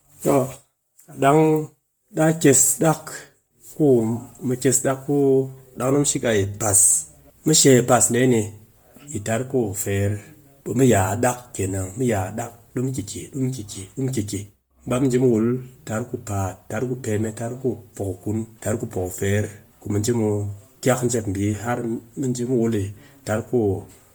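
Bluetooth LC3 compression throughout: the speech carries a heavy breathy, grainy edge, likely LC3 at 32 kbps filling its zeroed upper spectrum with noise.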